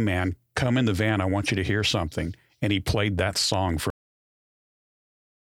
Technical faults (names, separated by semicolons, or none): cut-off end